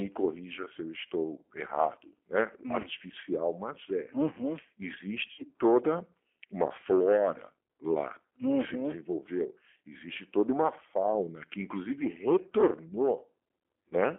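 It's speech over a narrow phone line carrying the G.729 codec at 8 kbit/s. Everything sits between roughly 250 Hz and 3.4 kHz, so it sounds thin. The codec damage is plainly audible: with only a filter, a pitch predictor and a handful of pulses per frame to rebuild the voice, it comes out slightly rough and synthetic throughout. On top of that there's VoIP packet loss concealed by the speech codec at three points. The first, at 2.82 to 2.88 s, covers about 20 ms of missing audio. The second, at 5.32 to 5.43 s, is the worst, with about 60 ms gone, which fits three lost packets in a row. The third, at 13.89 to 13.93 s, is another 20 ms gap. In each case the decoder keeps extending the last pitch and filter shape at falling gain, so you get a short buzzy, smeared stretch instead of a hard dropout, and the voice takes a moment to firm up again afterwards.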